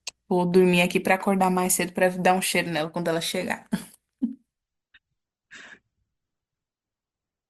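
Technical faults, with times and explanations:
4.62 to 7.50 s, adaptive stream at a lower bitrate: the speech switches abruptly, without a gap, to a thinner stream with nothing above 8 kHz, suggesting a drop to roughly 16 kbit/s Opus.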